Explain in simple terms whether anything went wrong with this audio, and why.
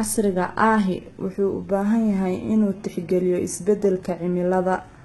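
Heavy HE-AAC compression, likely, squeezed the speech from start to finish. It fakes the treble by copying lower sounds upward, so s sounds turn gritty and nothing reaches above 11.8 kHz.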